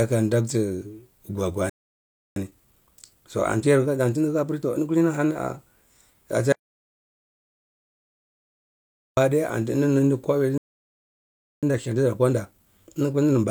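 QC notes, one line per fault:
1.70–2.36 s and 10.58–11.63 s, playback stall: The player most likely ran dry of buffered data or had its output thread held up, so nothing reached the output until it recovered. The speech halts mid-flow, for about 0.67 s the first time and about 1.05 s the second, then resumes. These are hard pauses inside running speech, not natural breaks.
2.36–5.36 s and 11.63–13.50 s, time-compressed catch-up: Right after each stall the player works off its backlog by dropping small slices of audio and cross-fading the remaining pieces together, running at about 1.15 times normal speed. The speech sounds hurried but keeps its normal pitch. Both stretches run from the end of each stall to 5.36 s and to the end of the clip.
6.52–9.17 s, audio dropout to silence: The input signal was lost for about 2.65 s, most likely through a dropped link, a disconnected device or a stray mute, while recording carried on writing silence. 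The speech cuts off mid-flow into silence with no room tone underneath, then returns just as abruptly. Whatever was said during the gap is gone rather than delayed.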